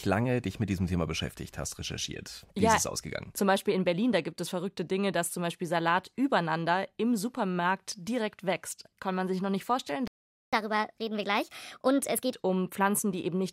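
At 10.08 s, right after "sich noch nicht vorstellen", the speech cuts out mid-flow and leaves about 0.45 s of silence before resuming at 10.53 s. This playback stall was likely caused by the player running short of data or having its thread blocked, so output halted until it recovered.

From 10.53 s to 12.34 s the speech runs fast and sounds higher-pitched. This is catch-up at higher speed: the player resamples its backlog to play at 1.25 times normal speed, which raises pitch by roughly four semitones.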